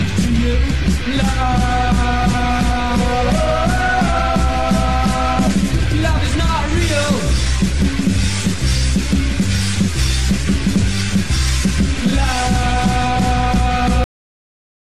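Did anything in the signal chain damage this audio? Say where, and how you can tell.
Yes: a cut-off end at 14.04 s. The sound stops mid-event into dead digital silence with no decay. The final buffers never got written, so it's a storage or playback truncation.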